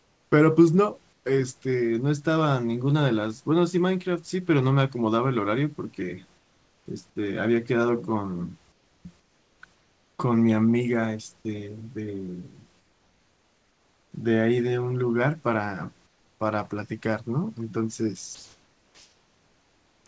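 A speech clip over a call link with nothing above 8 kHz, which fits G.722. Comfort noise replaces the background at 0–0.32, 1.13–1.25, 6.38–6.86, 8.72–10.19, 12.80–14.12, 16.07–16.40 and 18.35–20.06 s. The room tone becomes flat, featureless hiss, mostly about 4–5 dB quieter. Discontinuous transmission likely cut the pauses.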